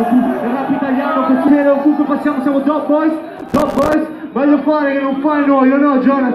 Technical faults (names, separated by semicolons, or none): skip ahead; jitter buffer speed-up; processor overload crackle